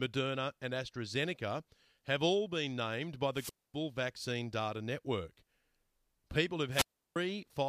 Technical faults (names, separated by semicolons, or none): wireless microphone squelch dropout